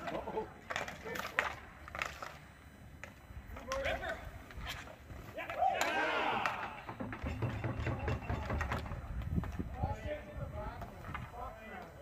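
There's USB whine running through the whole thing, a steady fixed-pitch tone built on 1 kHz, with its strongest component at 2 kHz, sitting roughly 30 dB under the signal. That's the bus's 1 ms frame current leaking in through power or ground.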